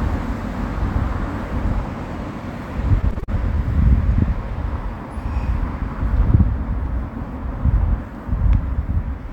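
Between 3.01 and 3.30 s, packets arrived late and the jitter buffer ran dry five times, causing repeated stalls (stutter). The receiver stretched the last sound to cover about 103 ms, with the longest gap 40 ms, so nothing is lost but that stretch drags and stutters.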